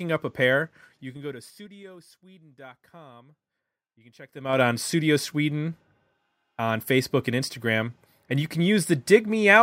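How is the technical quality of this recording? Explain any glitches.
The recording has audible zipper noise in two places. From 0.60 to 1.96 s, just after "up a", the level falls about 25 dB in 3 dB jumps at roughly seven per second. From 4.27 to 4.61 s it climbs about 25 dB in 3 dB steps at roughly twenty per second. The gain is changed in unsmoothed increments, and each jump clicks, so a ticking rides on the speech. The waveform envelope looks like a staircase, and the spectrogram shows faint vertical lines at each step.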